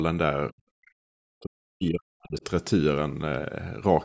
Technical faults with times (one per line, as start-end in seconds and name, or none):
0.53-1.01 background gated by the echo canceller
0.86-0.91 other side's voice leaking through
1.29-2.43 speech suppressed in double talk